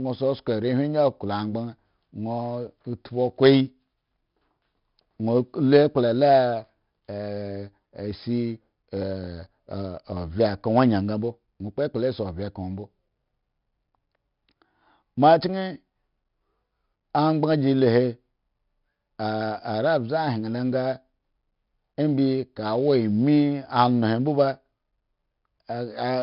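From start to finish the speech carries 4-bit ADPCM compression, and it's pretty heavy: a gritty hiss that swells with every loud syllable, roughness on sharp onsets where the adaptive step lags behind, and nothing above 5.3 kHz, which fits a stream of around 44 kbps.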